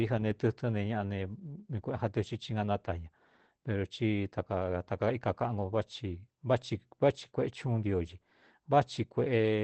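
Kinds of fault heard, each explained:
Opus voice compression: The speech is plainly muffled and slightly hoarse, with a faintly robotic edge, and nothing is heard above about 8.6 kHz throughout. This points to Opus running its SILK linear-prediction voice coder in wideband mode at a low rate, around 12 kbps. It limits the band to about 8 kHz and codes the excitation coarsely, so the top end is lost and the voice's texture turns rough.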